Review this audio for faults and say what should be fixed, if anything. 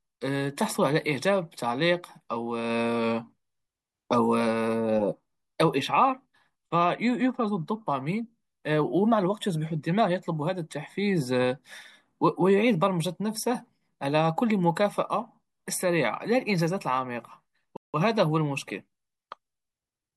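Bluetooth stall, 17.77 to 17.94 s: the speech drops abruptly to silence for about 0.17 s, then resumes just as abruptly. A hard gap like this, with no fade and no crackle, most likely comes from a wireless link where radio interference delayed packets long enough for the headphones' small playback buffer to empty, so output halted until the retransmitted audio arrived. To prevent it, keep the phone close to the headphones with a clear path and away from crowded 2.4 GHz sources, or monitor over a wired connection.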